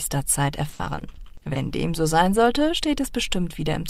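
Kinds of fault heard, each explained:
Repeated packet loss (robotic sound): From 0.69 to 1.57 s, eleven short holes, the longest 60 ms, are each patched by stretching the preceding sound, about 30% of that stretch. The close succession of patches gives a choppy texture rather than one isolated dropout.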